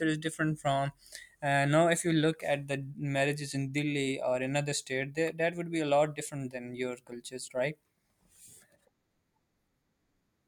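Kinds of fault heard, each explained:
Clock slip clicks: a soft rattle of faint ticks about every 30 ms through the speech, likely two unsynchronised clocks around 700 ppm apart, each slipping one sample.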